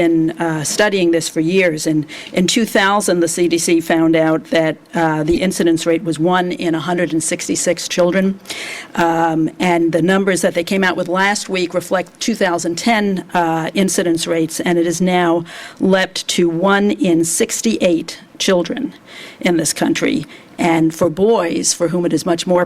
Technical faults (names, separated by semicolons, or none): corrupt frame decoded